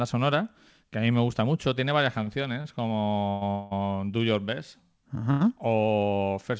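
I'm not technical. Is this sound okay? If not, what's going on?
No. The speech has two kinds of hiccup. There are short stalls from a late packet at 2.24, 2.61, 3.04 and 5.31 seconds. Each time, a sound is held a little too long, then the speech carries on. Nothing is lost. There are also two call audio freezes, from 3.30 to 3.43 and from 3.51 to 3.73 seconds. The last sound turns into a fading buzz or hiss before the speech resumes where it stopped, likely because audio pieces arrived late.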